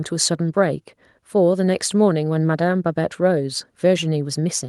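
No technical faults can be heard anywhere in this speech recording. The audio carries on steadily with no dropouts, clicks, glitches or breaks at any point.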